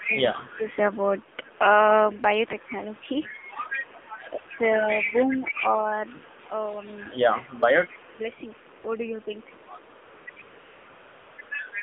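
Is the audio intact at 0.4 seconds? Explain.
No. Through the first 0.63 s the sound dips by about 15 dB and thins out in pieces, roughly 0.4 s of it in total. This is likely speech suppressed in double talk: with both sides active, the echo canceller could not tell this talker from loudspeaker echo and turned everything down.

A faint delayed copy of the sound, about 30 dB below it, trails 147 ms behind, here and through to 11.82 s. That points to an echo leak, with the far end likely on a loudspeaker and its echo canceller letting part of the microphone pickup return.

The band is also cut to roughly 200 Hz to 3.6 kHz, and the sound has a buzzy, synthetic edge. That is the AMR narrowband mobile codec at a low rate, around 7.4 kbps, rebuilding the sound from a vocal-tract model and a few pulses per 5 ms.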